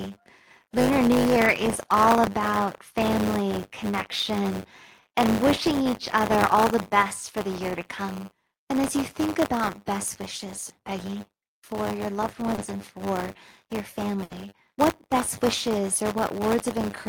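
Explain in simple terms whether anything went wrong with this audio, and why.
Buffer tearing runs through the whole speech: the program filling the buffer and the hardware reading it slipped, so a sliver of each buffer replays audio about 30 ms old, causing a steady 100 Hz rattle.

At 12.55 s, between "for your loved" and "and for your", short concealed packet loss drops 20 ms, and the receiver patches it with a brief smeared continuation.

At 14.23 to 14.33 s, after "and for your", a burst of packet loss removes 80 ms; the last sound is stretched and faded before resuming at "what best wishes".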